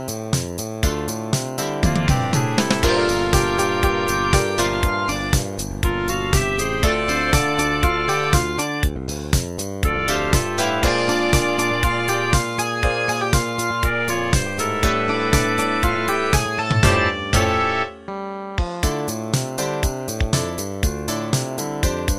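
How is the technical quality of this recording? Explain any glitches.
The technical quality of this recording is sound, with no glitches to explain.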